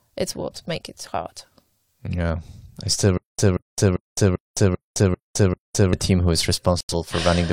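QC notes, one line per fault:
3.18–5.93 s, stutter with silent gaps: the stream likely stalled and kept replaying its last buffered fragment on each retry. A 184 ms burst of speech repeats seven times, each followed by 210 ms of digital silence, a steady 394 ms cycle, and the intended audio is lost.
6.81–6.94 s, digital broadcast dropout: the receiver lost the signal or rejected corrupted frames and muted until clean data returned. The speech cuts abruptly to silence, with about 85 ms of audio missing, which fits two lost frames, before resuming.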